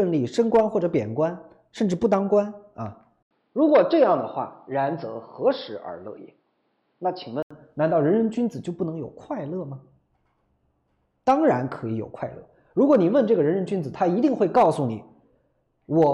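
From 3.23 to 7.51 s, after an 80 ms gap, nothing above 5.4 kHz remains. Faint noise appears. Likely cause: input switched to a poorer device.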